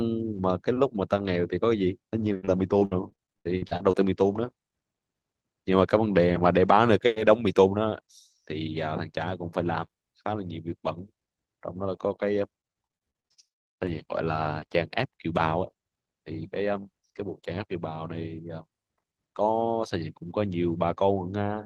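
Repeated packet loss (robotic sound) at 2.31 to 3.95 s and 12.61 to 13.90 s: 13 short dropouts in each, gaps up to about 80 ms, patched by stretching the previous sound, giving choppy speech with pieces missing.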